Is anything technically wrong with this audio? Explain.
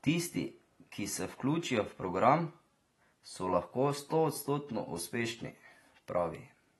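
Yes. Throughout the speech, nothing sounds above 12 kHz and sibilants and sustained sounds smear and warble, likely AAC compression, at a bitrate that fits roughly 32 kbps.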